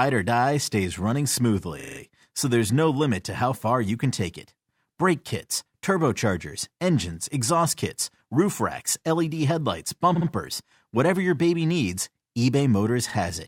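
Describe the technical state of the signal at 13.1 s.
At 13.1 s you've got repeated frames: from about 13.09 to 13.14 s, a 50 ms chunk of the compressed stream got delivered twice, so the decoder just plays that slice of speech a second time. The length fits a run of roughly five frames. You hear it as a quick stutter, and the clip runs 50 ms longer for it.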